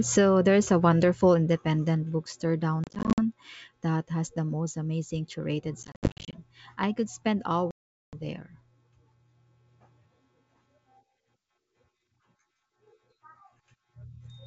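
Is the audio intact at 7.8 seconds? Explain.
No. Right after "I could spend", the speech drops into a hard-edged silent hole from 7.71 to 8.19 s, about 420 ms long, and comes back slightly distorted before settling. This is packet loss on an ADPCM call, with roughly forty packets missing and filled with silence. The decoder's adaptive predictor and step size drift out of step with the sender's, so the wideband G.722 stream needs tens of milliseconds to recover.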